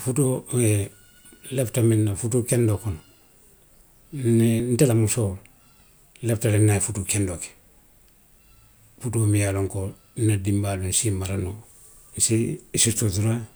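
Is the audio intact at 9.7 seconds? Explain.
Yes, the speech at 9.7 seconds plays through intact, with no fault heard at that moment.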